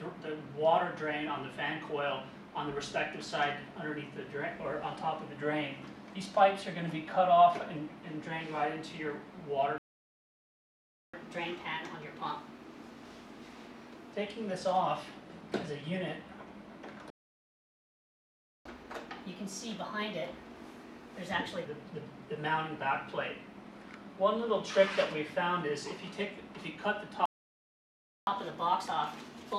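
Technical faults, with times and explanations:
9.78–11.14 s, 17.10–18.65 s and 27.26–28.27 s: playback stall. The player likely ran short of data, so output falls silent for 1.35 s, 1.55 s and 1.02 s, then resumes.
11.14–14.14 s, 18.65–21.65 s and 28.27 s to the end: catch-up at higher speed. The player resamples its backlog at 1.15× to regain lost time, so the sound runs faster and about two semitones sharp.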